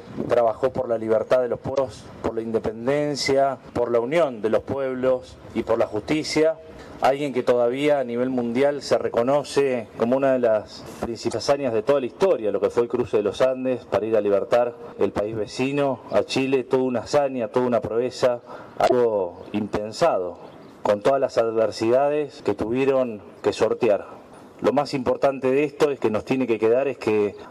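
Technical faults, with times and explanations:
1.71–1.78 s, 11.27–11.34 s and 18.85–18.92 s: damaged data in a compressed stream. Each is a brief glitch of about 70 ms where corrupted bytes made the decoder misread the affected frames, lose sync and scan for the next valid frame header before playback resumed.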